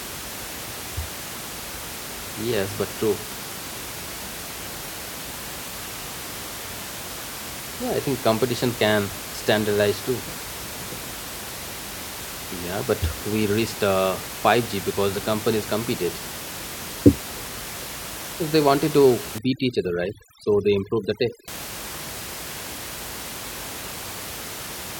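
From 19.38 to 21.48 s, right after "they wanted to", overdone noise removal sets in: bands near the noise estimate are cut hard, so the room noise, about 11 dB below the speech, drops and breaks up into twinkling specks. A spectrogram shows scattered isolated specks between speech and ragged, gappy harmonics.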